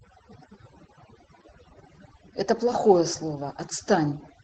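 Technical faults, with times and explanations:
Throughout, mains hum: a steady 50 Hz tone, roughly 20 dB below the speech, from power-line coupling, drawn as an unbroken horizontal line along the spectrogram's floor.
Throughout, overdone noise removal: heavy suppression gates individual bands, leaving a near-silent background of twinkling specks, seen as scattered isolated dots between words.
Throughout, Opus voice compression: coarse SILK coding makes the speech muffled, hoarse and slightly robotic, fitting roughly 12 kbps. The spectrogram shows a hard, flat ceiling at 9.5 kHz.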